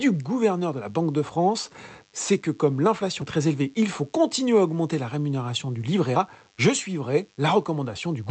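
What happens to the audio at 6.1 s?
DECT cordless phone buzz runs through 6.1 s, as it does across the whole clip: a nearby handset's radio bursts every 10 ms get rectified into a thin, steady 100 Hz buzz, faint at roughly 40 dB below the speech. A spectrogram shows evenly spaced horizontal lines at 100 Hz and its harmonics, and the waveform shows a small ripple repeating every 10 ms.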